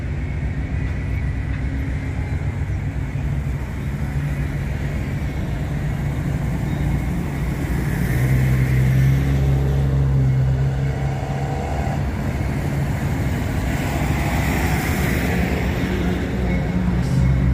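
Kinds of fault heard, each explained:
No kinds of fault are heard in this clip.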